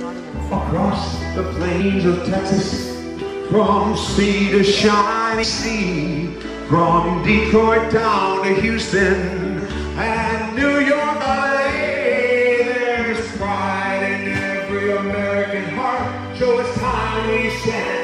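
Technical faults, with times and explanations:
1.79, 5.42, 9.58 and 11.2 s: compressed frames skipped. Audio jumps ahead about 150, 200, 150 and 700 ms, fitting whole 26.1 ms frames.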